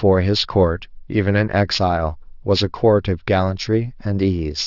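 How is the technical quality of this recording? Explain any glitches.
The recording is compromised by aliasing that runs through the whole clip. The sound points to a rate reduction from about 24 kHz to 12 kHz with no anti-alias filter, so everything above 6 kHz has folded back below that edge at unrelated, inharmonic frequencies, fairly strong against the speech itself. Sibilants turn gritty and metallic, and the spectrum stays busy right up to 6 kHz. A plain low-pass would simply sound dull; this sounds harsh and wrong instead.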